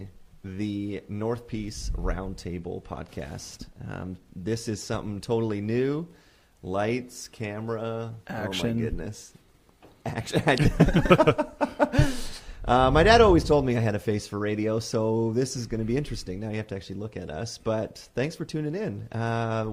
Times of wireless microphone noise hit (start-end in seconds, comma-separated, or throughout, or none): none